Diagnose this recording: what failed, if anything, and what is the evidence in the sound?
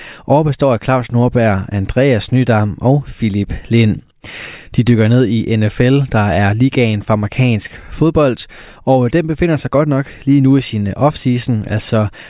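Nothing failed; no stage shows any audible fault.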